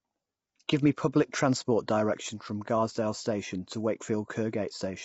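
Right from the start the speech has a rough, grainy texture, with noise filling the gaps between the harmonics and nothing at all above 7.7 kHz. That's likely low-delay AAC compression, the AAC-ELD kind used for video calls. Its very short frames can't separate pitch harmonics cleanly, and the damage here is plainly audible, the sort you'd expect at something around 24 kbps, where there just aren't enough bits to go round.

At 0.68 s there's a brief pre-echo: a hiss lasting about 14 ms just ahead of a sharp attack, which lands soft and a bit smeared. The transform codec spreads its quantisation noise across the whole block, so noise scaled for the loud attack also leaks into the quiet moment right before it.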